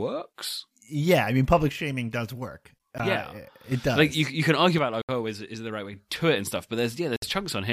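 At 1.69 s the speech drops by about 6 dB until 3.72 s, and again from 4.78 to 5.93 s. That is likely one channel dropping out of a mono-summed pair. Brief silences interrupt the audio at 2.98 s, at 5.02 to 5.09 s, and at 7.16 to 7.22 s. These are likely Bluetooth stalls, where the headphone buffer emptied while delayed packets were resent.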